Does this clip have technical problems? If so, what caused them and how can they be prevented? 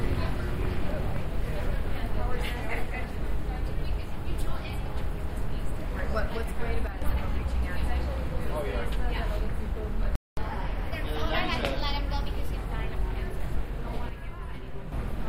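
Yes, there are three kinds of fault here.

One channel drops out from 6.87 to 7.02 s and again from 14.09 to 14.92 s. The level falls abruptly by about 6 dB, which likely means one stereo side vanished before the mono sum. Checking cable and connector seating, plus channel-level monitoring, would prevent it.

There's a playback stall from 10.16 to 10.37 s, a silence of about 0.22 s in mid-flow. The player likely starved for data or had its thread blocked. A bigger buffer and giving the audio thread priority would stop it.

Straight after, from 10.37 to 12.55 s, comes catch-up at higher speed: the player resamples at 1.1x, so everything runs faster and about a semitone and a half higher before settling back. Avoiding the stall removes the need for this.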